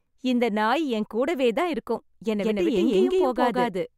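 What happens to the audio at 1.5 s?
Nothing goes wrong at 1.5 s; the speech runs through that moment intact, with no dropout, click or distortion.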